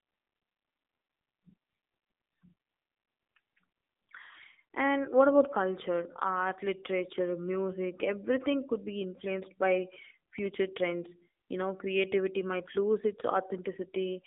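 A speech clip passed through an AMR narrowband mobile codec at about 7.95 kbps, modelling the vocal tract in 20 ms frames. Throughout, the line band runs roughly 250 Hz to 3.7 kHz, with nothing above 3.8 kHz, and plainly audible buzzy, synthetic coding damage.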